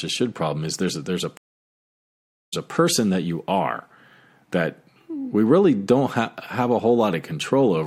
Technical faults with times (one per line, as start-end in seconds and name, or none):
1.37-2.70 stream reconnect